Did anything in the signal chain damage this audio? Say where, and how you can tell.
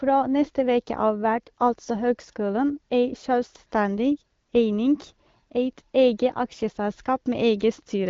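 No, nothing here points to damage anywhere in the chain; what you hear is an ordinary wideband call path, with the AMR-WB (HD Voice) codec running at 12.65 kbit/s and the spectrum stopping around 7.4 kHz, just as that codec is meant to behave.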